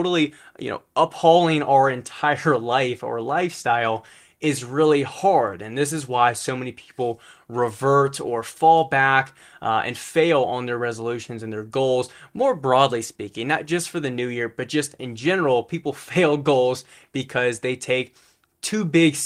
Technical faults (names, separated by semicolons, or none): none